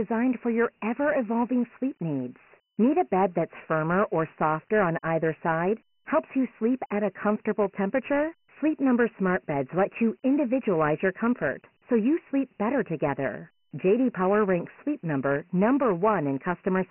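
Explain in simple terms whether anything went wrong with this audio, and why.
The whole recording, start to finish, carries Dialogic VOX ADPCM damage, the coarse 4-bit coding used for phone menus and voicemail. Everything above 3 kHz is gone, which points to a 6,000-sample-per-second version. Unlike a merely narrow phone line, a gritty hiss trails the speech.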